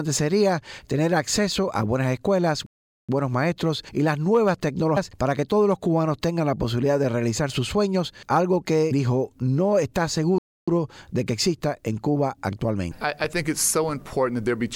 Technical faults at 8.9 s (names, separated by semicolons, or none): compressed frames skipped